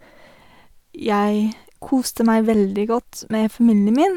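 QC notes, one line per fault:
No faults heard anywhere in this speech recording.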